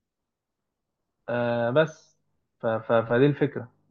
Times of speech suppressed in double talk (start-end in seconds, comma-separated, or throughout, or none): none